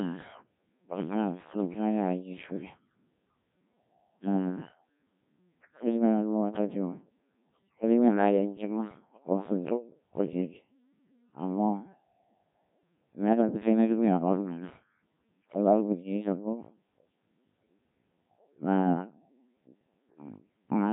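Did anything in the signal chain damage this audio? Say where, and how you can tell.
Yes, at the codec: the speech sounds robotic and buzzy throughout, with nothing above 3.8 kHz. That's Codec 2, likely around 1.3 kbit/s, rebuilding the voice from sine waves.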